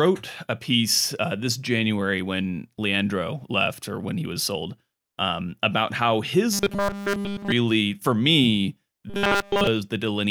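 A rigid, metallic buzz appears in this speech clip twice: from 6.53 to 7.52 s, right after "um about how his" and before "for me", and again from 9.10 to 9.67 s, just after "for me". Both stretches carry a fixed 200 Hz drone, the robotic sound from repeated short buffers. It is likely caused by audio arriving too seldom, so playback loops a 5 ms slice for essentially the whole stretch while the real audio is skipped.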